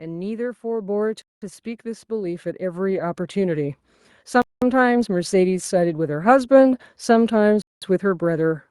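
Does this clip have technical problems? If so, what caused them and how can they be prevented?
Yes. Automatic gain rising runs from 0.62 s to 5.4 s. The gain control judged the input too quiet and raised its level by about 12 dB over nearly five seconds, so the speech and the background noise swell together. Fixing the recording level at the source, or slowing or disabling the automatic gain control, prevents this.

A gap between chunks appears at 1.22–1.42 s, 4.42–4.62 s and 7.62–7.82 s. Each is a 200 ms hole of silence with abrupt edges, inserted after every 3 s of speech where one block of audio ends and the next begins. Playing or joining the chunks back to back with continuous buffering prevents it.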